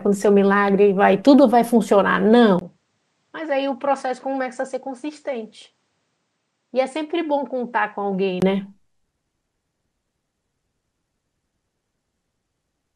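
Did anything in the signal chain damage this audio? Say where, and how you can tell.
Yes. From 2.59 to 8.42 s the speech turns duller and drops about 10 dB, with nothing above 9.6 kHz and a faint new noise floor. A 20 ms gap marks the switch. The likely cause is the input switched to a poorer device at the driver stage.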